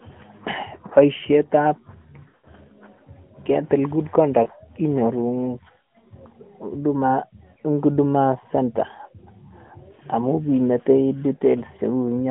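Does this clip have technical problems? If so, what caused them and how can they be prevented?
Yes. The speech briefly stutters, smears and fades at 2.24 to 2.48 s, where several short gaps cluster over about 200 ms, the longest roughly 80 ms, drawn out and thinning before the voice returns weak. Shorter dips and warbles occur at 4.44 to 4.48 s, 6.00 to 6.07 s, 7.54 to 7.57 s and 9.68 to 9.73 s. These are lost AMR speech frames. Radio errors corrupted 20 ms frames, so the AMR narrowband decoder (running at 12.2 kbps) repeated the last good pitch and vocal tract settings at falling gain. Stronger channel coding, better signal conditions or retransmission-capable links would prevent it.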